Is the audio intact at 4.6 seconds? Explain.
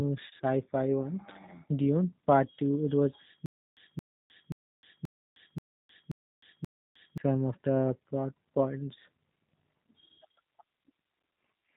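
No. At 4.6 s the sound is caught in a stutter with silent gaps running from 3.46 to 7.18 s: the same 222 ms fragment keeps returning after about 309 ms of dead digital silence, repeating every 531 ms, seven times in all. The likely cause is a stalled player or stream that replays its last fragment at each retry and then runs empty, so whatever should have sounded in that span is lost.

That moment also carries the G.729 codec damage present throughout: a dull, narrow sound with nothing above 3.8 kHz and a plainly rough, synthetic edge. At 8 kbit/s the speech is not sent as a waveform. It is rebuilt from a vocal tract filter, a pitch predictor and a few pulses per frame.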